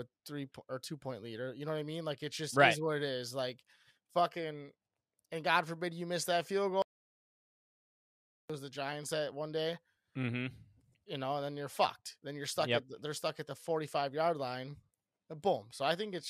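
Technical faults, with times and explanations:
6.82–8.50 s, audio dropout to silence: the speech cuts out mid-flow and returns about 1.67 s later, and the gap between is plain silence with no room tone beneath it. That emptiness points to the input signal itself going missing, likely through a disconnected device, a failed link or a stray mute, while the recorder or encoder kept writing silence in its place. Whatever was spoken during those 1.67 s is lost from the clip.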